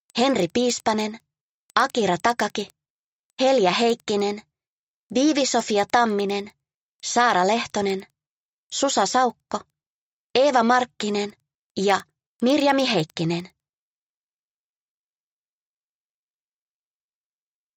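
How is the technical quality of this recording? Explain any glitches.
The technical quality is marred by one fault that runs the whole length. A resampler restarted on every block converts the audio from 16 kHz to 48 kHz. Each 100 ms block is processed alone. At every block edge, the converter lacks the true neighbouring samples and leaves a small error. The result is a steady ticking at 10 Hz. It is heard only while sound is present and disappears in silence.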